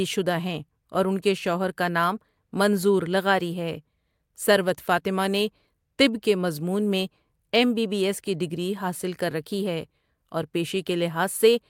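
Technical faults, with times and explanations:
No technical faults can be heard in this speech clip.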